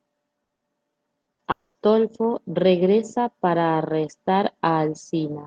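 Right at the start of the speech there are two bursts of packet loss, at 0.43 to 0.52 s and 0.55 to 0.64 s, and the same pattern comes back at 1.21 to 1.30 s and 1.33 to 1.42 s. Each time a short run of packets went missing. The receiver papered over it by stretching the last bit of sound for about 60 ms, so you hear a brief held buzz or hiss that sags in level. Then the speech picks up again with roughly 60 ms skipped.

Straight after that, from 1.51 to 1.78 s, there's a longer hole that sounds like a long network dropout is the likely cause. The concealment keeps extending the last sound for the whole 240 ms or so, fading as it goes but never quite reaching silence. When the audio returns, about the same span of speech is simply gone. All of this sits on a call-codec path whose top end stops around 12 kHz, which fits Opus at around 32 kbps.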